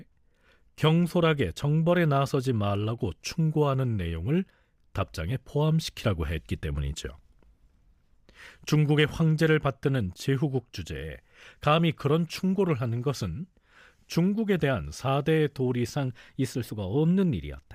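Drift correction step from 15.95 s to the end: speech speeds up 5.7% and rises 95.5 cents, likely a clock-matching rate jump draining a buffer.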